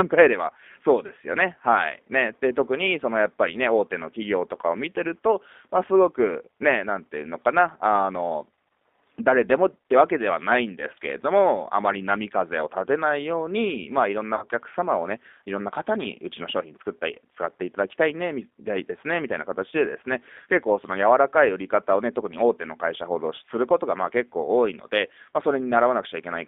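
Throughout, the speech carries G.729 codec damage: the line is band-limited to roughly 250 Hz to 3.6 kHz, and the rough, slightly synthetic texture fits an 8 kbit/s model-based coder. Unlike a plain low-pass filter, the timbre itself is rebuilt and sounds artificial.

At 1.06 to 1.12 s and again at 14.36 to 14.45 s, VoIP packet loss concealed by the speech codec stretches the sound into a fading buzzy tone or coloured noise, covering about 30 ms and then 60 ms. Unlike a dropout, there is no silence or click, and the voice recovers only gradually.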